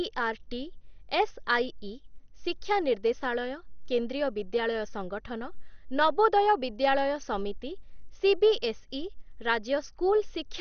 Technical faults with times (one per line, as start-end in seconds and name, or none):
0.00-10.60 MP2 compression